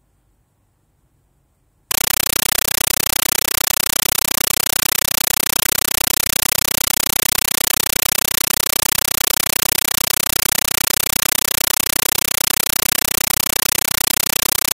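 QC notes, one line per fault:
1.91–14.76 s, compressed stream played as audio: from 1.91 s to the end, the speech is replaced by very loud chattering static. The output is treating an undecoded AC-3 bitstream as plain PCM samples. Each coded frame comes out as a burst of noise about 9.33 ms long, followed by zero padding, repeating at 31.25 Hz, which gives the rapid buzzing texture. The density of the bursts fits a 448 kbps stream.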